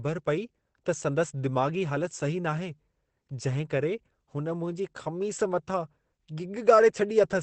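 The speech runs through the whole clip with a muffled, hoarse character and nothing above about 8.5 kHz, so the upper treble is simply absent. This damage is heavy and most likely comes from Opus compression at a low rate, which fits a bitrate near 12 kbps. At that rate the encoder drops into its speech-oriented SILK mode and a wideband limit, modelling the voice coarsely instead of preserving full-band detail.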